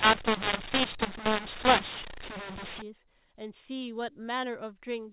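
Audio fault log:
0.0–2.82 s, mu-law and A-law mixed up: A-law telephone speech is decoded as mu-law, scrambling levels so loud parts turn harsh and the quietest samples jump above silence, filling pauses with noise. Unlike clipping, quiet passages distort too, and it ends at 2.82 s.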